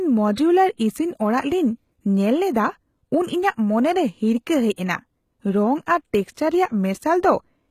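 Speech, coded throughout with what is likely HE-AAC compression. The treble is present but rebuilt from copied lower bands, so sibilants sound gritty and metallic instead of simply dull, as a plain low-pass would make them. Nothing survives above 14.9 kHz, and the plainly audible damage fits a bitrate near 20 kbps. Pre-echo appears at 0.35 to 0.37 s, spreading 27 ms, and again at 4.76 s, spreading 18 ms. In both places a short hiss comes just before a sharp attack and softens it, so it differs from a click or noise burst that sits independently of the onset.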